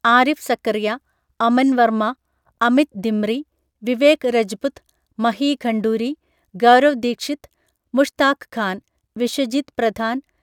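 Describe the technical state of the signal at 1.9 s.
At 1.9 s the speech signal is intact, with no dropout, clipping, distortion or other fault at that moment.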